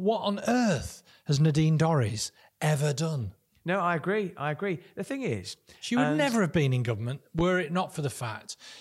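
A loud pop at 7.39 to 7.42 s, after "have been in government", rises roughly 10 dB over the speech, likely a voltage spike from a plug or switch.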